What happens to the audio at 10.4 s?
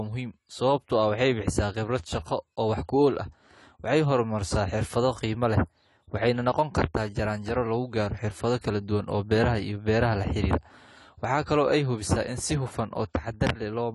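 The speech at 10.4 s carries plainly audible AAC compression artefacts, present throughout the clip. Nothing remains above 11.5 kHz, and the band-limited, smeared texture with watery sibilants fits a low-bitrate encode, likely AAC-LC around 32 kbps, starving spectral detail.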